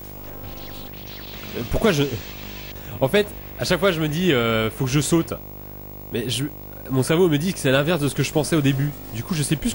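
A screen or video cable is coupling into the audio path throughout, producing video or display buzz: a 50 Hz buzz at the picture's field rate with hash above it, plus a thin, very high line-rate tone at 15.6 kHz, sitting roughly 15 dB below the wanted sound.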